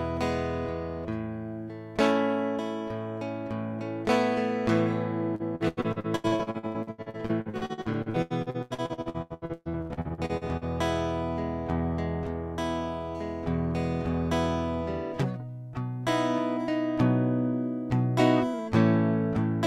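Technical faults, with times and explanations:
5.35–10.64 s: repeated packet loss (robotic sound). The music breaks up over and over, with 49 gaps covering about 43% of the span, the longest 123 ms. Each hole is filled by stretching the last sound, giving a robotic chop rather than isolated dropouts.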